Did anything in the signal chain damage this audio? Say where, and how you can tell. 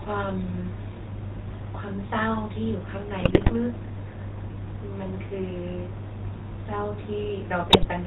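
Yes, the codec stage: the GSM full-rate codec colours the whole clip, with buzzy, gravelly speech and nothing above 4 kHz, from its coarse pulse-driven excitation.

On the radio link, GSM bit errors hit at 3.20–3.55 s and 7.70–7.87 s as squawks and gargling, where corrupted filter and gain values bent the spectrum and the level.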